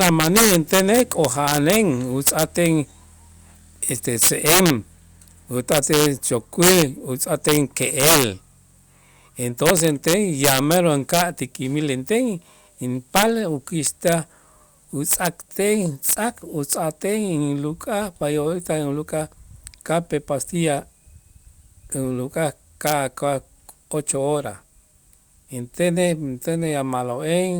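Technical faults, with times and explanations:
Throughout, integer overflow: with about 11 dB of overdrive, the loudest speech peaks, a small fraction of a percent of samples, wrap to the opposite extreme instead of limiting, giving violent cracks. On the waveform, peaks jump rail to rail; the spectrogram shows full-band vertical streaks.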